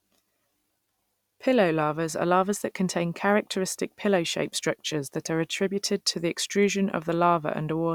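A speech recording with no technical faults to report.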